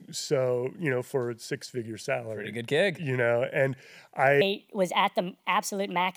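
From 4.41 s to the end of the speech, a wrong sample rate takes over. Audio captured at a rate that fits 32 kHz is played as if it were 44.1 kHz, with no conversion, so everything runs 1.38 times fast and rises about 5.5 semitones, sounding high and hurried. Speed and pitch shift together by the same ratio, which separates it from a plain pitch shift or a time-stretch, where only one of them moves.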